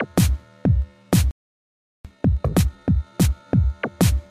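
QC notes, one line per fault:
1.31–2.05 s, playback stall: the sound stops dead for about 0.74 s, likely the player starving for data; the waveform goes flat and the spectrogram is blank.
2.05–3.51 s, time-compressed catch-up: audio hurries at 1.5 times speed, pitch unchanged; spectrogram events crowd closer while harmonics keep their frequencies.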